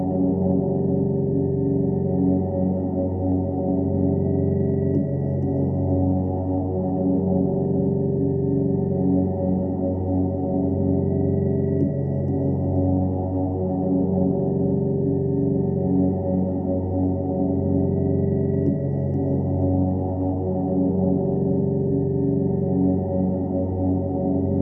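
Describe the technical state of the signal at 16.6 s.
At 16.6 s the signal is intact, with no dropout, clipping, glitch or other technical fault audible at that moment.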